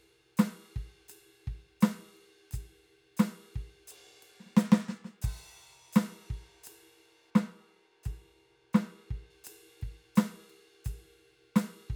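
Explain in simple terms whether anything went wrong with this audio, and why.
From about 7.30 to 9.30 s the music turns dull and muffled: that's de-emphasis applied wrongly, a treble cut undoing boost that was never there.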